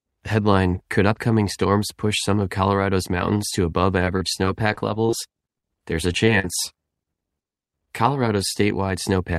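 Repeated packet loss (robotic sound) runs from 4.05 to 5.14 s, starting just after "mountains to above". Over that stretch the speech arrives with seven separate holes, the longest 39 ms, about 130 ms missing in all. Each hole is patched by extending the sound just before it, and the next one comes soon after. About 12% of the span ends up synthetic, so the passage sounds choppy, with pieces of speech dropped out and replaced.

Short concealed packet loss occurs three times: at 6.13 s and at 6.26 s, each losing about 10 ms, and from 6.40 to 6.45 s, losing 40 ms. Each time a small piece of the stream missed the decoder. The receiver continued the preceding sound to cover the hole, from its pitch if voiced or as shaped noise if not, then blended back into the real signal. Each event is heard as a brief smear or wobble.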